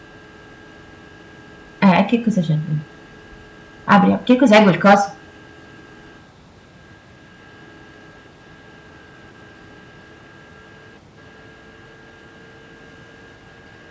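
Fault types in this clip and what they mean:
Hard clipping: Peaks in the speech exceed what a stage in the chain can pass, so the waveform tops are sheared flat, generating harmonics high up the spectrum. A short burst from 1.83 to 2.14 s, overdriven by about 4 dB, produces crackle on the loudest syllables. From 3.91 to 4.95 s the overload reaches about 9 dB, and the flattening turns into a harsh fuzz on every loud moment, heard within the call band that stops at 8 kHz.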